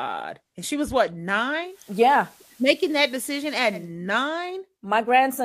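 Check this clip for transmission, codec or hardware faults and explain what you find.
There's one fault: a digital radio blending to analogue. Right after "she was what", at about 1.6 s, the receiver loses its digital stream and cross-fades over about 230 ms to the station's FM feed. The level shifts by about 2 dB and hiss well below the speech comes in, until it blends back at 3.94 s.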